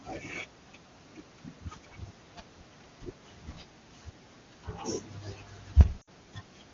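At 6.01 s, lost AMR speech frames leave a 60 ms hole, which fits three dropped 20 ms frames. The decoder repeats its last good pitch and vocal tract settings at falling gain, so the speech smears and fades. The spectrogram shows frozen harmonics thinning until 6.09 s.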